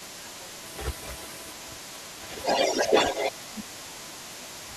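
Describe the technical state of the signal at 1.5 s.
Echo leak runs through the whole clip, including 1.5 s. A delayed copy of the speech arrives 553 ms behind it, a little louder than the speech itself. The likely cause is a far-end loudspeaker whose echo canceller let its microphone pickup through and sent it back.

Speech suppressed in double talk also covers 1.5 s, within the span from 0.05 to 2.44 s. The speech dips by up to around 15 dB over roughly two seconds, likely because the echo canceller could not separate the talker from the loudspeaker echo and turned both down.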